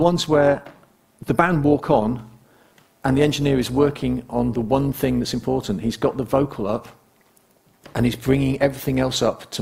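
From start to finish the audio carries overlap-add ripple: windowed frames were recombined with an overlap that fails to sum to constant gain, so the level dips and swells by about 6 dB once per frame, around 200 times a second, giving a metallic buzz with extra tones around each note.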